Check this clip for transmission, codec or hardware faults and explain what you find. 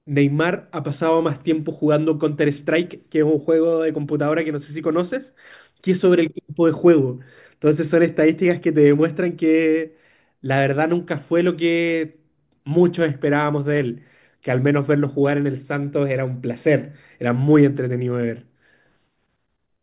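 Nothing stood out on listening to this speech recording.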